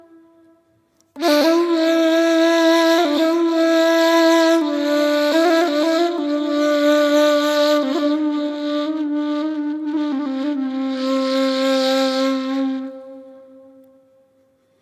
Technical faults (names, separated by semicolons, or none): none